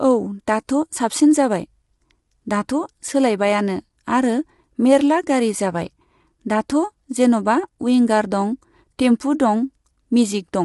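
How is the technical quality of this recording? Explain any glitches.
The quality is noticeably compromised. Throughout, the speech sounds rough and grainy with nothing above 11.6 kHz, most likely low-delay AAC compression, where short frames blur harmonics at a bitrate fitting around 32 kbps.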